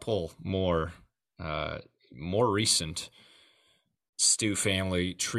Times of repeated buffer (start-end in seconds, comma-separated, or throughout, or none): none